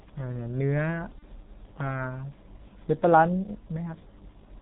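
The speech is carried by the G.723.1 codec throughout, at about 6.3 kbit/s. Nothing above 4 kHz survives. The slow voice model and heavy coding damage leave the voice muffled and hoarse. Consonants are smeared.

From 1.19 to 1.24 s, VoIP packet loss concealed by the speech codec breaks in. The gap fits one lost 30 ms frame. The decoder carries its last pitch and filter forward at falling gain. The voice turns stretched and faded, then recovers weakly.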